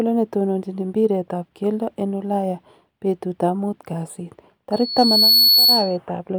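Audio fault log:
4.72–5.97 s, loudspeaker feedback squeal: right after "betutab muut kasit", the microphone picks up the loudspeaker it is driving, and at 4.4 kHz the gain around that loop exceeds one. That frequency reinforces itself on every pass, so a thin, piercing tone rises out of the speech over roughly three quarters of a second and swells to around 10 dB above it. It then holds as a steady whistle until it stops near 5.97 s.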